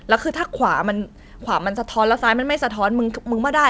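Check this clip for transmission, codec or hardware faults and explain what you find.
No transmission, codec or hardware faults are audible in the speech; the band stops at 8 kHz, consistent with a normally working wideband call path such as G.722.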